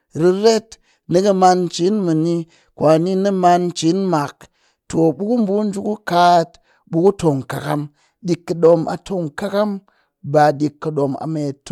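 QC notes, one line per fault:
0.46–0.48 s, 1.16–1.46 s, 7.07 s and 8.65–8.74 s, hard clipping: the speech peaks run past the ceiling of a stage in the chain by about 2 dB (about 1 dB at 7.07 s), so their tops are sliced flat. Those squared-off crests add high harmonics, heard as brief crackle on the loudest moments, longest across the 0.3 s run near 1.2 s.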